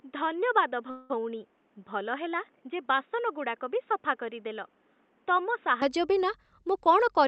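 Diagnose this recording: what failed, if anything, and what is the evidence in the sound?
The first 5.8 seconds sound like they come from a poorer input device, likely a change at the capture end, somewhere around the driver or device selection. Nothing comes through above 3.8 kHz, so it's dull and boxy, with some background noise sitting well below the speech and the level a few dB low. At 5.82 s the sound opens up again with no gap, which points to the input switching back to the better device.

There's a call audio freeze from 0.90 to 1.11 s, in the network and jitter-buffer stage. For about 194 ms the receiver holds and smears the last bit of sound into a fading buzz instead of going silent. The speech then picks up right where it stopped, with nothing lost. That's likely packets arriving late and the buffer running dry, so the gap gets added to the delay.

Near the end, from 6.74 to 7.24 s, a jitter buffer speed-up makes the speech run at about 116% without any pitch change, so it sounds a bit rushed. 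This happens at the call processing stage. The receiver is cutting out tiny pitch-period slices, roughly a tenth of a second in total, to drain excess buffered audio and bring the delay back down.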